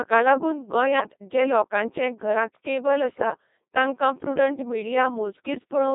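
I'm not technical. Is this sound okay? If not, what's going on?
No. Throughout, the speech passes through a Codec 2 vocoder, which rebuilds the voice from pitch and tone-colour data, so it sounds robotic and buzzy. Bit errors on digital voice radio, from corrupted data, make the voice jump and warble into gibberish at 0.98 to 1.14 s, just before "जे लोकांचे घरांत कॅबल", and at 3.10 to 3.38 s, just before "तांकां प्रुडंट".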